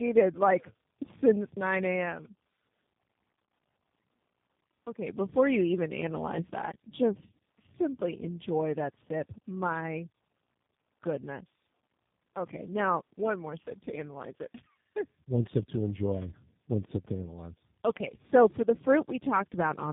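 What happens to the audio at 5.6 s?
At 5.6 s, as throughout, tandem speech coding: repeated decode-and-recode passes compound into rough, warbly, muffled speech capped near 3.7 kHz, harsher than any single codec alone.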